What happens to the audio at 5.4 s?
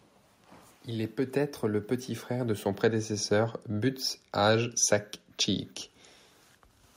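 Nothing goes wrong at 5.4 s: the audio carries straight through that point with no dropout, click, distortion or other fault.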